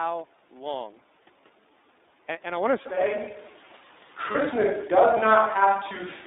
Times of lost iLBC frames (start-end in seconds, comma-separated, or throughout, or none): 4.31-4.37